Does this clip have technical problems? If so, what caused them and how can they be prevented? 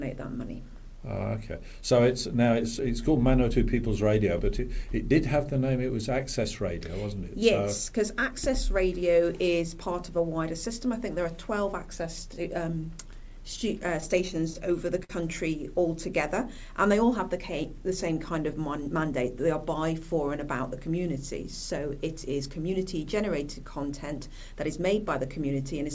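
Yes. From 13.52 to 15.11 s there are repeated stalls (stutter). Packets kept arriving late, so the jitter buffer ran dry ten times. Each time the receiver stretched the last sound to cover the wait, about 131 ms in all and 50 ms at most. Nothing is lost, but the sound drags and catches. A larger or more adaptive jitter buffer, and a steadier network path with less congestion, would prevent this.

From 18.59 to 19.12 s a jitter buffer speed-up follows. The buffer held more audio than it needed, so the receiver cut out short pitch-period slices, roughly 40 ms in total. The sound runs at about 106% speed at unchanged pitch and briefly feels hurried. More consistent packet delivery, which keeps the buffer from overfilling and then draining, would avoid it.

The whole clip passed through a call codec, with nothing above 8 kHz, which fits G.722.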